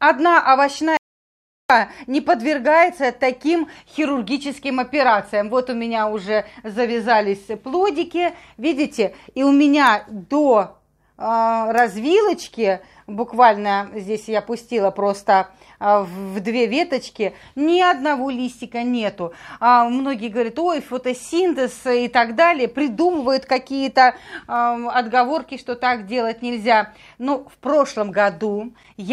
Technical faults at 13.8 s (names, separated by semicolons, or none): none